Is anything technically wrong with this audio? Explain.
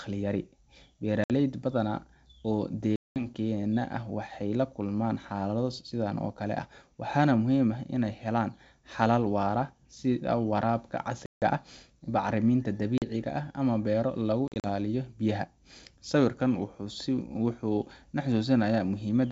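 Yes. The speech has packet loss on an ADPCM call, with silent holes at 1.24–1.31 s (60 ms lost), 2.96–3.27 s (200 ms), 11.26–11.44 s (160 ms), 12.98–13.03 s (40 ms) and 14.48–14.66 s, where 100 ms drops out in short bursts of up to 40 ms. The decoder's adaptive predictor and step size lose track of the sender's, so after each hard-edged gap the speech returns with brief, slight distortion. That recovery, rather than a clean gap, sets it apart from a simple dropout.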